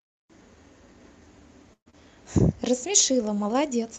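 Speech, carried over a call path whose Opus coding caps the high end at around 8 kHz, shows two faults. At 1.73 to 1.95 s a long network dropout likely stalled delivery, with the delay shifting by roughly 50 ms: the receiver extended the last sound as a fading buzz for about 195 ms, including roughly 100 ms of near-silence, and about 100 ms of audio never returns, so speech resumes with a gap in it. Then, from 2.71 to 3.62 s, a jitter buffer slow-down sets in as the receiver rebuilds its reserve, probably after raising its delay target. It repeats single pitch periods and fragments of pauses, adding 68 ms, so the speech plays at 93% speed at unchanged pitch, with stretched sounds.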